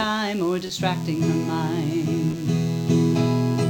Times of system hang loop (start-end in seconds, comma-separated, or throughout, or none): none